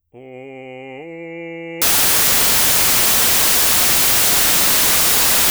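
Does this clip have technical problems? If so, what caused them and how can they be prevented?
Yes: from 1.82 s to the end at 5.51 s the music becomes loud, harsh broadband noise as samples are built from the wrong bytes, with low-order bytes read as high-order ones. Unlike added hiss, it comes from the sample values themselves being rebuilt wrongly. Prevent it by matching the reader's byte order and alignment to the file format.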